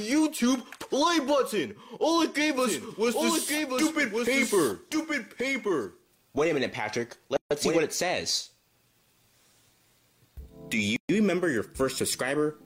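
From 2.58 s to 7.78 s the audio is heard twice: a second, full-band copy trails the original by about a second, only about 5 dB quieter, with no decay or room colour of its own, and it cuts in and drops out abruptly at those edges. This doubled audio track is likely caused by the same signal being captured again through a slower path, or by an edit that leaves two copies out of step. Separately, the sound stops dead for 141 ms from 7.37 s to 7.51 s and for 129 ms from 10.96 s to 11.09 s. In each case it then resumes exactly where it left off, and the edges of the silence are softened rather than perfectly clean. These are gaps at a join of encoded pieces. The audio was encoded in separate sections and spliced without trimming, so each section's leading encoder delay and the padding on its final frame remain as silence, and the codec blurs the hard edges.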